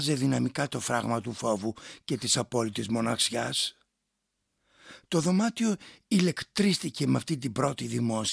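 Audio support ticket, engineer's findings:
Nothing stood out on listening; no fault to log against this speech recording.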